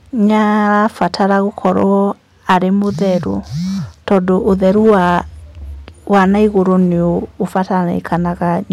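Harsh, fuzzy crackle rides the louder speech at 0.74–1.83 s, 2.50–2.57 s, 4.08–5.19 s and 6.13–6.73 s, with briefer ticks at 7.56–7.60 s and 8.12–8.15 s. This is hard clipping: peaks overdriven by about 1 to 7 dB are sliced flat, spraying high harmonics.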